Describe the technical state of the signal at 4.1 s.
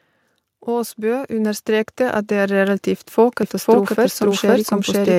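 At 4.1 s the signal carries a doubled audio track, present from 3.43 s to the end. A second copy of the same audio, likely captured again through a slower path, is mixed in roughly half a second behind the original and at about the same level. The late copy is full-band and dry, with no decay or room colour. It cut in abruptly at 3.43 s, so every syllable is followed by a distinct, equally loud repeat.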